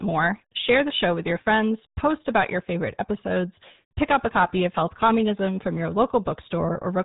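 Speech, and it carries the sound of the RealAudio 14.4 codec from start to finish. Nothing above 3.8 kHz survives, so the voice is boxed in and muffled, with sibilants and consonant edges blunted. The codec damage is heavy: vowels take on a gargly, bubbling texture as the coder rebuilds the voice from a coarse model. The thin, smeared result fits a low-rate dial-up speech codec running at about 8 kbit/s.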